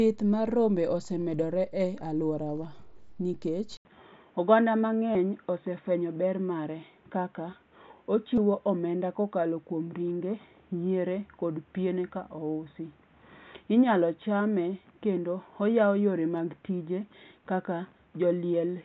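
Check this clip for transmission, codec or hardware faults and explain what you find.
Two kinds of fault are present: a switch to a narrower-band input partway through, and three short concealed packet losses on the Bluetooth headset link.

At 3.77 s, right after "aluora wa nikech", there is a gap of about 80 ms. From then to the end, nothing sounds above 3.8 kHz. This is likely an input switched to a poorer device: a new noise floor, about 40 dB below the speech, appears, while the level stays roughly the same. The gap and the new noise floor set it apart from a codec simply lowering its bandwidth.

At 5.13 s, 8.36 s and 16.37 s, concealed Bluetooth headset packet loss fills about 15 ms each time. The receiver repeats recent waveform, which fits two lost frames, so each loss is filled in rather than left as the silent hole of a plain dropout. The mSBC link can be heard carrying the wideband sound before the switch.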